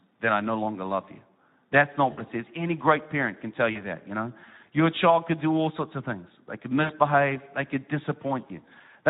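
Throughout, the speech sounds noisy and hoarse. This is plainly audible Speex codec damage, consistent with a low-rate setting around 11 kbps that leaves too few bits for the excitation.

The voice smears into a stretched sound that fades at 2.11 to 2.22 s, just before "it says"; at 3.71 to 3.80 s, between "great parent can tell" and "that you know"; and at 6.83 to 6.96 s, just before "they could". This is VoIP packet loss concealed by the speech codec: the decoder stretches its last pitch and filter while lowering the gain, which fits gaps of about 60, 40 and 60 ms.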